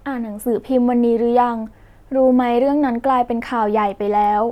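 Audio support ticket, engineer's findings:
No audible faults found in the speech on this ticket; nothing to attribute to capture, processing or transport.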